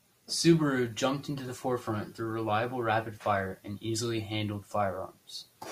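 No technical faults can be heard anywhere in the speech recording. There are no moments to mark and no defects to describe.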